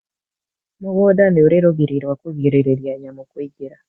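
From 0.79 s to 3.06 s the speech and the background noise beneath it swell together by about 10 dB. This is automatic gain rising: the call's gain control judged the input too quiet and slowly turned it up. What separates it from a compressor's pumping or a sudden level jump is the slow, steady climb over more than two seconds, with the noise floor rising in step with the speech. The audio stops at 8 kHz throughout, as expected from the call's Opus codec.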